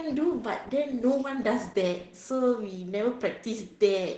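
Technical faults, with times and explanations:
Throughout: Opus voice compression. The speech is cut off above about 8 kHz, and coarse SILK excitation coding leaves it muffled and hoarse, which fits roughly 12 kbps.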